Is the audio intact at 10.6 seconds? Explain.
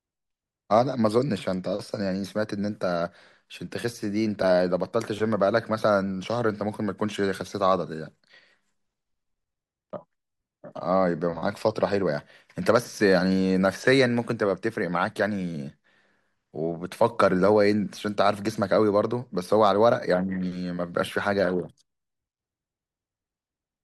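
Yes, the speech at 10.6 seconds is intact, with no dropout, click, distortion or other fault at that moment.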